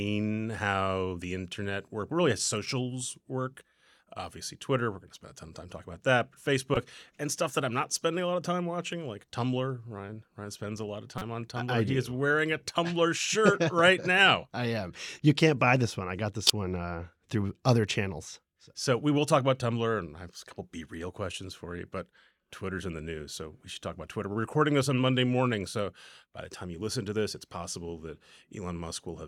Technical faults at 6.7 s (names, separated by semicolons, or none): corrupt frame decoded